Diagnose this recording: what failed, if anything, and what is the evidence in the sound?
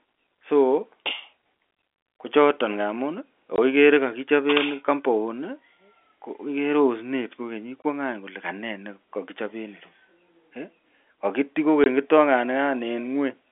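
Packet loss filled with silence, network stage. The speech drops out abruptly at 3.56 s, 7.82 s and 11.84 s, each gap about 20 ms with hard edges, which fits one lost 20 ms packet per event, zero-filled in place by the receiver.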